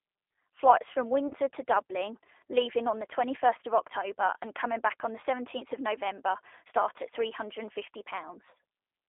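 Throughout, the speech sounds narrow, slightly rough and synthetic, with nothing above about 3.4 kHz. This is the G.729 codec at 8 kbit/s rebuilding the voice from a filter and a few pulses. From 1.28 to 1.34 s, a brief buzzy or noisy smear replaces the speech, then fades. This is VoIP packet loss concealed by the speech codec: a 30 ms gap, consistent with a single lost packet, was extrapolated from the last frame.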